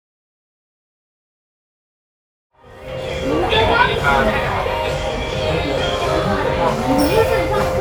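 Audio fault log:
No faults found.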